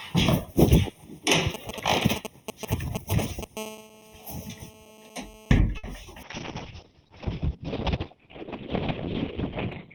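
A recording of everyday sounds with a channel delay causing comb filtering throughout. One channel runs roughly a third of a millisecond behind the other before the two are summed to mono. Anything common to both cancels at evenly spaced frequencies, the first notch falling somewhere around 1.5 kHz. The notches never move. So the whole clip sounds hollow and phasey. From 1.54 to 3.44 s come GSM signalling bursts. A nearby 2G phone is exchanging short groups of radio bursts with the network, as before a call or text. The audio circuit rectifies them. The result is a galloping dit-dit-dit of brief 217 Hz buzzes. It is loud, only a little below the wanted sound. From 3.57 to 5.59 s the pattern turns into GSM phone buzz. Now the phone is in a call and transmits in bursts 217 times a second. The rectified pulses give a hard, raspy 217 Hz buzz rich in harmonics. It is steady, about 17 dB below the sound, and has nothing to do with it. 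At 5.77 s there is a short stall from a late packet, lasting until 5.85 s. The packet arrived late and the jitter buffer ran dry. The receiver held the last sound for 60 ms, then carried on from the same point. Nothing is lost. The sound just hangs briefly, with a faint buzzy dip. At 6.03 s comes a short concealed packet loss, ending at 6.06 s. This time 20 ms of audio never reached the decoder. The receiver bridged the gap by extending the preceding sound for 10 ms and blending back. It is heard as a tiny smear. From 6.24 s to the end a call bitrate drop takes over. The sound points to the encoder falling from around 128 kbps to about 7 kbps after the bandwidth estimate collapsed. It stays at that floor for the last 3.7 s. The audio bandwidth shrinks from 20 kHz to 4 kHz. The sound becomes muffled, rough and watery, with coarse, smeared detail, and it does not recover before the clip ends.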